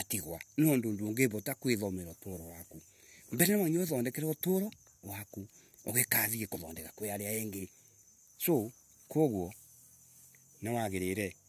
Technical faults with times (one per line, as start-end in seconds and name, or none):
none